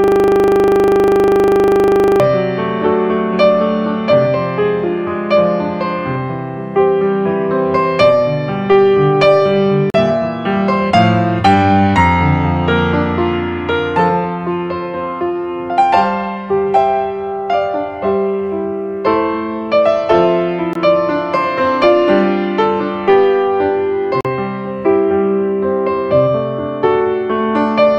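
From the very first moment, running until 2.2 s, the audio is a rough, steady buzz at 25 Hz: a single 40 ms fragment repeats exactly, roughly fifty times over, and is already cycling when the clip begins. This is a system hang loop. The machine or its audio driver stalled while the sound hardware kept replaying the same small ring buffer, and the 40 ms loop length sets the buzz pitch.

Three short silences follow, at 9.90 s (about 40 ms), 20.73 s (about 20 ms) and 24.21 s (about 40 ms). After each gap the sound picks up further along, as if it had continued unheard. These holes are likely a Bluetooth dropout, where audio packets missed their delivery deadline to the headphones and were discarded. The lengths fit one packet lost at 20.73 s and two each at the other two points.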